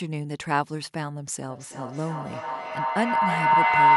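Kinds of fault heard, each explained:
Feedback howl: A microphone picks up a loudspeaker carrying the same call, so the sound circles between them. Each trip round the loop comes back louder than the last. From about 1.47 s the repeats grow instead of fading and narrow to a tone near 1 kHz. Each trip round the loop takes roughly 0.3 s. It peaks about 12 dB above the speech and runs to the end.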